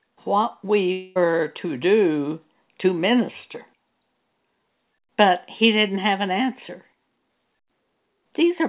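From 0.92 to 1.17 s the speech gives way to a buzzy continuation of the preceding sound that fades rather than dropping to silence, most likely a long network dropout concealed by the receiver over roughly a quarter second. A spectrogram shows smeared, repeating harmonics fading there, with everything capped at 4 kHz by the call path.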